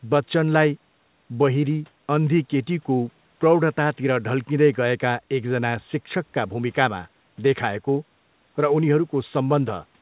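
No technical faults can be heard in the speech. It comes through a call path that stops at 4 kHz, the narrow telephone band that fits the G.711 A-law codec.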